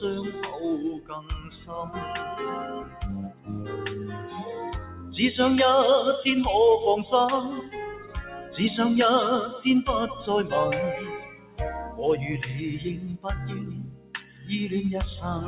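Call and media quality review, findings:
Noise suppressor applied to music or sounds, across the whole clip. Level swings of around 15 dB. Attacks pass while sustained material and decays sink, giving a pumping, fluttering, thinned texture. Probable component: a speech-tuned noise suppressor left active. It treats steady tones and tails as noise. This differs from compressor pumping, which tracks overall loudness. Here the gain follows how steady the sound is, not how loud. Bandwidth stops at 4 kHz, consistent with a G.711 mu-law call leg.

Sound cut by the noise suppressor at 0.97–1.5 s (about 13 dB down), 2.83–3.02 s (about 11 dB), 3.28–3.5 s (about 14 dB), 4.82–5.11 s (about 8 dB), 7.94–8.51 s (about 10 dB), 11.19–11.59 s (about 14 dB) and 13.84–14.5 s (about 14 dB). Each lasts roughly 0.2–0.5 s. Held or fading sound dips, or its tail is truncated. These are not packet-loss dropouts, which cut abruptly regardless of content and often bring concealment artefacts. 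These dips are gain reductions shaped by the signal itself.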